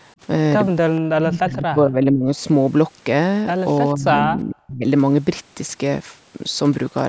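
At 0.96 to 1.01 s, a faint delayed copy of the talker comes through, about 0.45 s late and roughly 25 dB below the live speech. This is an echo leak. The far side's echo canceller likely let part of its loudspeaker pickup slip back.

From 1.13 to 2.31 s, the speech dips while the other side talks. It falls by up to roughly 30 dB, over about a second in total. This is speech suppressed in double talk. The echo canceller likely mistook the talker for echo and turned both down. It happens again from 3.93 to 4.87 s, deeper this time, up to roughly 40 dB, for about 0.7 s in all.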